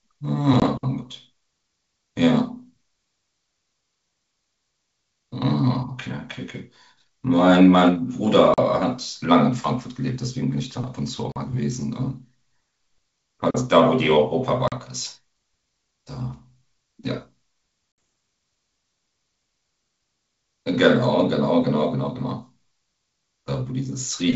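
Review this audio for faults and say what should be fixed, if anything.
Packet loss on an ADPCM call cuts silent holes at 0.60, 8.54, 11.32, 14.68 and 17.92 s, lasting 20, 40, 40, 40 and 60 ms. After each hole, the decoder's predictor is out of step, so speech returns slightly distorted and settles within some tens of milliseconds. Prevent it with packet loss concealment and jitter buffering, or forward error correction on the network path.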